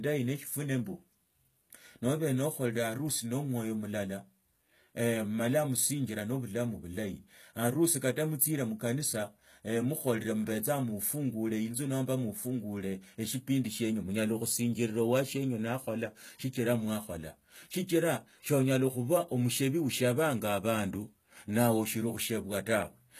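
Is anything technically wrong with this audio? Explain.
Yes. Throughout the speech, there is audible HE-AAC compression damage. Nothing is present above 14.9 kHz. The upper band sounds rebuilt from copied lower bands, so s sounds turn gritty and metallic. This likely comes from HE-AAC coding at a low bitrate, consistent with about 20 kbps.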